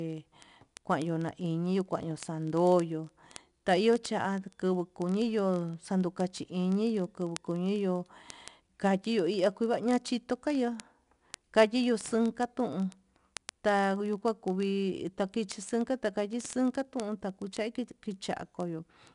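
From the start of the speech, 4-bit ADPCM compression coats every loud syllable in a gritty hiss that rises and falls with the level, and consonant attacks smear where the adaptive step size cannot grow fast enough. Nothing remains above 10.6 kHz, which fits a reduced sample rate and a data rate near 89 kbps. On a spectrogram, broadband noise fills in beneath each louder passage and everything ends at a hard ceiling at 10.6 kHz.

From 0.10 s to the end, word clock ticks run through the whole clip, about every 30 ms. They add up to several hundred sharp clicks of uneven strength. The receiving device is clearly free-running rather than locked to the sender's clock, off by roughly 0.1 percent. Each time the two clocks slip past each other, the sound points to a single sample being dropped or repeated. On a waveform, each tick is a one-sample discontinuity. On a spectrogram, the ticks form a dense, evenly spaced comb of thin vertical lines.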